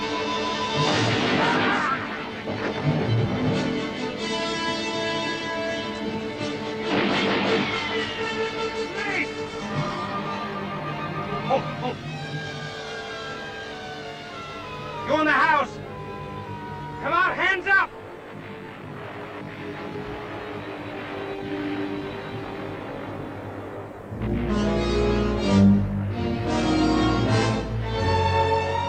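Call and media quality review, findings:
Rough, slightly doubled sound for the full length of the clip. Channel delay (comb filtering): one channel lags the other by roughly 20 ms before the mono sum, so shared content cancels at evenly spaced notches starting near 30 Hz.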